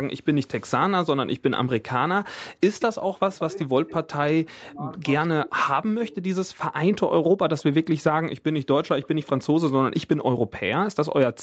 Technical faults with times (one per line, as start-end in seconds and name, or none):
2.79-2.85 echo leak
3.25-6.41 speech suppressed in double talk
3.60-3.65 echo leak
7.58-7.63 echo leak